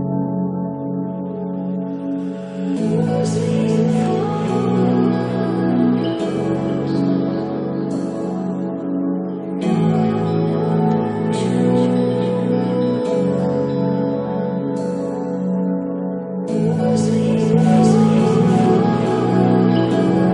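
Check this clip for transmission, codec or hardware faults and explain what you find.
One fault is present: a doubled audio track from 17.53 s to the end of the clip. At that point a second, full-band copy of the sound cuts in abruptly, trailing the original by about a second at roughly equal level. The likely cause is the signal being captured twice, once through a slower path, or an edit leaving two copies misaligned. It sounds like a dry, uncoloured repeat overlapping the original, with no decay or room character.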